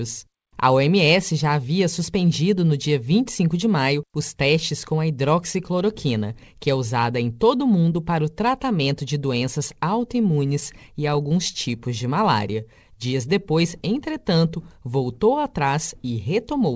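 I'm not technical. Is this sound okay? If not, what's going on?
No, there are a few glitches, all typical of audio sent over a call connection.

From 10.16 to 11.57 s there are scattered short gaps. About seven tiny bits of audio went missing, none longer than roughly 10 ms. The receiving end patched each hole by stretching the last bit of sound, so you hear brief ticks or little smears rather than silence.

Next, from 11.71 to 13.30 s, there's a jitter buffer slow-down. The receiver was running short on incoming audio, so it quietly repeated tiny slices to build a reserve. The speech plays at about 94% speed, drawn out by roughly 110 ms, with the pitch unchanged.

Finally, from 15.44 to 16.71 s, there's the opposite, a jitter buffer speed-up. Too much audio had piled up waiting, so the receiver snipped out tiny slices, around a tenth of a second in total. The speech runs at about 106% speed and sounds a bit hurried, with the pitch unchanged.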